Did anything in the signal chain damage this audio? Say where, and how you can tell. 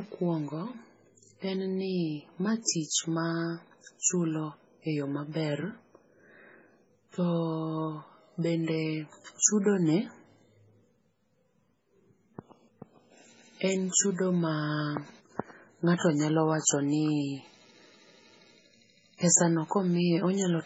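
Yes, at the codec stage: the speech is smeared and band-limited throughout, which fits low-bitrate audio saved at a high bitrate, likely a roughly 16 kbit/s MP3 later re-saved much larger.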